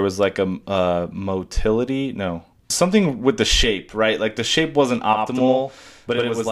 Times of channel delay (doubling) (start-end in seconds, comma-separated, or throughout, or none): 5.13-6.51